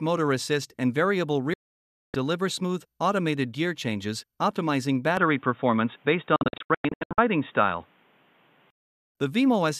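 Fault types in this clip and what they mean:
digital broadcast dropout: The receiver stopped getting usable frames, either because the signal went or because frames failed their checks, so it muted until clean data returned. Here the sound fades out within about 3 ms at 1.54 s and stays gone for about 0.6 s, until 2.15 s. From 6.36 to 7.18 s it breaks up into several short holes, together about 0.53 s of lost audio, the longest a bit under 0.1 s.
input switched to a poorer device: From 5.17 s to 8.70 s the sound goes dull and boxy, with nothing left above 3.8 kHz. The level shifts by around 5 dB and a new noise floor appears, roughly 40 dB under the signal. There's no gap at the change, and the sound clears again at 8.70 s. That pattern is most likely the system switching to a lower-grade microphone or a headset's call profile and then switching back.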